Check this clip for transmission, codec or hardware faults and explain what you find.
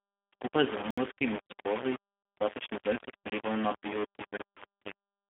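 Four kinds of fault are present: two running through the whole clip and two occurring twice each.

Grainy distortion throughout: a rough, signal-following grit sits about 10 dB below the speech, likely from rounding to very low bit depth without dither, which fits about 4 bits.

G.729 codec throughout: the speech is confined to 200 Hz to 3.6 kHz and sounds plainly synthetic and rough. This fits an 8 kbit/s codec rebuilding the voice from a filter, a pitch predictor and sparse pulses.

Blocks of digital silence at 0.91 to 0.98 s and 3.30 to 3.32 s: the audio drops abruptly to silence. The first hole lasts about 70 ms. The second lasts 23 ms, which fits a 1024-sample buffer left unfilled.

VoIP packet loss concealed by the speech codec at 1.47 to 1.53 s and 4.57 to 4.64 s: about 30 ms of audio is missing each time, which fits a single lost packet. The decoder fills each gap by extending the last pitch and filter as a fading buzzy tone or coloured noise, and the speech stays weakened for a short time afterwards.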